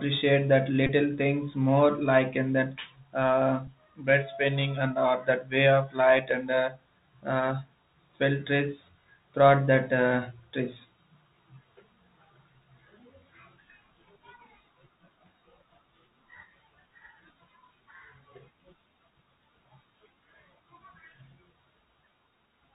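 Speech heard through a Bluetooth CVSD headset codec throughout, with plainly audible damage: nothing above 4 kHz, scratchy s sounds and a granular hiss beneath, consistent with a 64 kbps link. Unlike plain band-limiting, the slope-overload grit on loud high sounds gives it away. A Bluetooth headset packet repeated at 0.87 to 0.89 s makes a brief 267 Hz buzz, suggesting about six repeated packets. At 3.67 s a single repeat leaves only a small tick, which differs from a dropout because the sound never falls silent.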